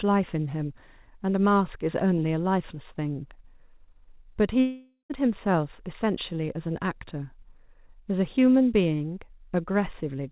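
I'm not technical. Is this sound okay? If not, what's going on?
No. At 4.6 seconds the speech breaks off for about half a second, until 5.12 seconds. That is a long network dropout, likely caused by audio that never arrived during the call. The receiver filled the gap by stretching the last sound into a buzz or hiss that fades. Near the end there is a brief moment of silence. The speech then returns, but that half second is gone. As expected on this phone-style call path, the sound has nothing above 4 kHz.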